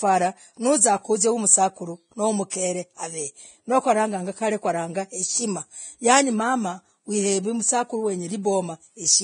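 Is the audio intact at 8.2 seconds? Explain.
No. At 8.2 s, as throughout, this is low-bitrate audio saved at a high bitrate: nothing above 9.7 kHz, a flat spectrogram ceiling, likely from an earlier low-bitrate encode.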